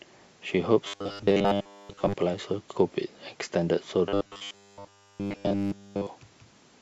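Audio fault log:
0.88 to 2.16 s, robotic sound from repeated short buffers: for most of this stretch the speech becomes a rigid, metallic buzz fixed at 100 Hz. It is likely caused by a 10 ms block being replayed while fresh audio fails to arrive. The spectrogram shows evenly spaced horizontal harmonics at 100 Hz and its multiples, and the waveform shows identical repeating cycles.
4.09 to 6.07 s, robotic sound from repeated short buffers: the same 100 Hz buzz returns and now covers the entire span, likely from the same 10 ms repetition. It shows as unbroken flat harmonic lines on the spectrogram and as a strictly periodic waveform.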